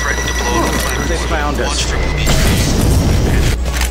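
Mains hum at 60 Hz runs throughout the sound, strong and only a little below the signal, from a ground loop or nearby transformer. Unlike wandering rumble, it holds a fixed pitch.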